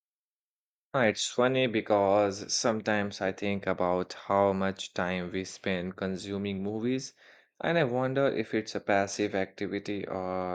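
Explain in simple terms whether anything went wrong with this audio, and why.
Nothing went wrong here that I can hear; the speech just carries on as it should, with no hiccups anywhere along the way.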